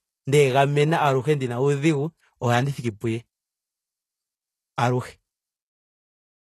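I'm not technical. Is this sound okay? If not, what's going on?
No. HE-AAC compression damage runs through the whole recording, from start to finish, and it is plainly audible. The speech has likely been squeezed by a very lean streaming-style codec. It stores only the lower part of the sound properly and fakes the upper part by copying lower sounds upward. That mismatch makes s sounds and other hissy consonants gritty, metallic or lisping, and nothing at all comes through above about 12.3 kHz.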